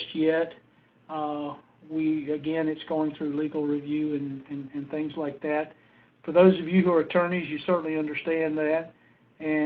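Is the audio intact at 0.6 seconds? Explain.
Yes, the audio at 0.6 s is intact, with no dropout, click, distortion or other fault to be heard at that moment.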